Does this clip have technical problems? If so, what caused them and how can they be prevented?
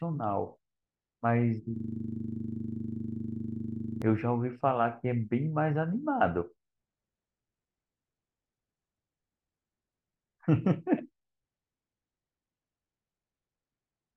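Yes. A system hang loop runs from 1.76 to 4.02 s: the computer or audio driver stalled while the sound hardware kept replaying its last buffer, so one 40 ms slice repeats dozens of times, giving a rigid 25 Hz buzzing stutter. Preventing it means keeping the audio thread at high priority on a stable driver, with a watchdog that mutes output when the buffer stops refilling.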